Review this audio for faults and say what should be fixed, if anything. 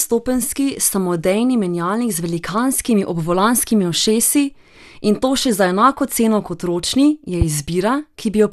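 The speech sounds dull and grainy from start to finish, with a gurgling texture and nothing above 12.1 kHz. This is likely MP2 compression at a low bitrate, around 80 kbps. Too few bits forced the upper sub-bands off, and the remaining bands were coarsely quantised. Encode at a higher bitrate or with a more efficient codec, and keep an uncompressed master.

A single loud pop sits at 7.41 to 7.44 s, well above the level of the speech, which carries on underneath. Its likely cause is a sudden voltage step or pulse from a plug, switch, static discharge or driver glitch. The following circuits shaped that pulse into a sharp crack. Secure connections, avoid switching during recording, and repair the spot with a declicker or a short crossfade.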